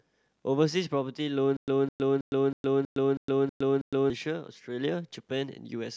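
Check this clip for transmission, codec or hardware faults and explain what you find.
One fault is present in this speech clip: a stutter with silent gaps from 1.57 s to 4.1 s. A burst of about 208 ms repeats eight times. Each repeat is followed by about 113 ms of dead digital silence. So the burst returns every 321 ms, at a steady, mechanical pace. The likely cause is a stalled player or stream. Each retry replays the last fragment, then runs dry. Whatever should have played during that stretch is gone.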